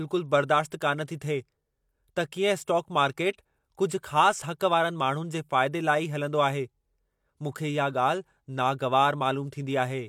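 No technical faults are audible anywhere in the speech.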